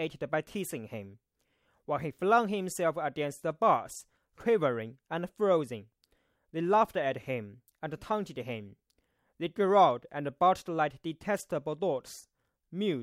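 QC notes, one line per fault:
No faults found.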